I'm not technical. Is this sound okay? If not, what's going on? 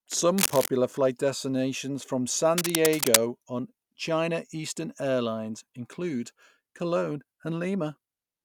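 No. There is cable scratch noise, a rough scratching or rustling about as loud as the speech, from 0.38 to 0.68 s just before "flight destinations from" and again from 2.58 to 3.17 s. It is most likely a worn cable or connector being moved. Unlike a single sharp click, each burst is dense and uneven.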